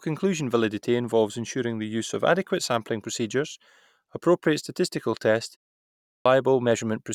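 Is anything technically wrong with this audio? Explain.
Yes. A clipped start after a pause: at 6.04 s, following "procedures appropriate statistical tests" and a 0.56 s gap, the output device wakes late, swallowing about 215 ms so the speech resumes abruptly.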